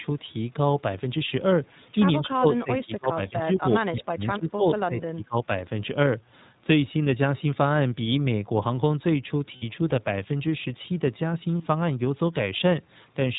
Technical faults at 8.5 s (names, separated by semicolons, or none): iLBC codec